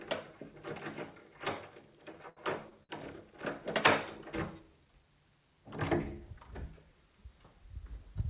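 From 2.12 to 2.92 s the sound stutters with repeated stalls: four times the jitter buffer ran dry and the receiver stretched the last sound, filling 158 ms (longest gap 72 ms, about a fifth of that span). Unlike dropouts, nothing is skipped. The audio drags, then resumes, all within the call path's 4 kHz band.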